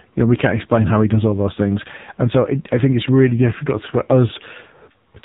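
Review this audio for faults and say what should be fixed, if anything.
The speech sounds buzzy, muffled and synthetic from start to finish, with nothing above 4 kHz. That's AMR narrowband mobile codec damage: an 8 kHz vocal-tract model with few pulses per frame. The heavy artefacts suggest a low mode near 5.9 kbps. To prevent it, capture or route the call over a wideband path instead of a narrowband mobile link.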